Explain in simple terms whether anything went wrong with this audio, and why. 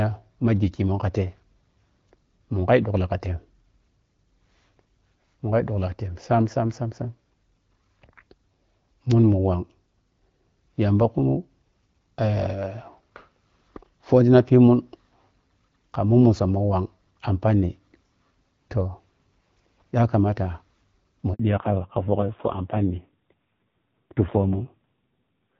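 At 21.33 s the phone hands the call from one network to another, and for about 60 ms, until 21.39 s, no speech data gets through. This is a handover gap: the speech fades out almost instantly and there is a brief silence before the new connection picks up. Anything said in that sliver of time is simply missing.

Right after the switch, from 21.39 s to the end of the clip, there is a fallback to narrowband. Until then the call runs in HD Voice, with its wider, lightly coded sound. After the handover it drops to an older, lower-quality phone codec that cannot carry anything above 4 kHz. The last few seconds sound duller and more muffled, with a rougher, grainier edge, like an old-fashioned landline.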